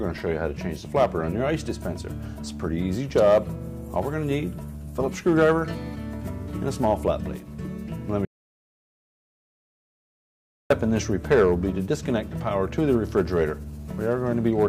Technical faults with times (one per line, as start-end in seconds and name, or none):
8.25-10.70 audio dropout to silence